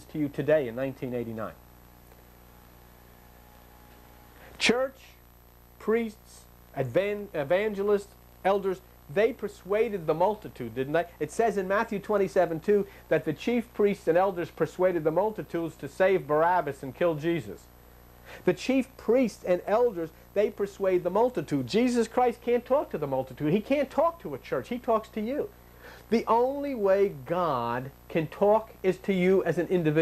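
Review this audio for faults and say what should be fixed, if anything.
Nothing here needs fixing: there are no dropouts, distortion or timing disturbances to correct.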